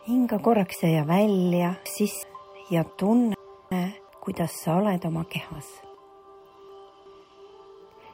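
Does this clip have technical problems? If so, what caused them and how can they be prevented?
Yes, the clip has chunks out of order in three places: 0.74–2.23 s, 3.34–4.09 s and 5.94–7.06 s. Segments about 370 ms long play one, two or three slots after where they belong, giving jumbled moments with hard joins. On a waveform the joins appear as abrupt steps at chunk boundaries. A spectrogram shows thin vertical broadband lines there, with contours breaking off and resuming. Tagging chunks with sequence numbers and reordering them in a buffer before playback or writing prevents this.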